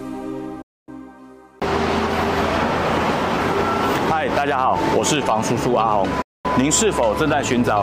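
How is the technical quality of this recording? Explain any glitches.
Two digital broadcast dropouts: at 0.62 s and again at 6.22 s, the receiver lost good frames and muted, fading out within about 8 ms. The holes last 0.27 s and 0.24 s, consistent with a handful of lost 32 ms frames.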